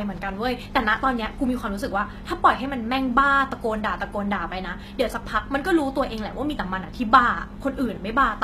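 Throughout the speech, the treble sounds synthetic, with gritty, lispy s sounds and nothing above 14.9 kHz, likely HE-AAC compression rebuilding the top band from copied lower bands at a low bitrate.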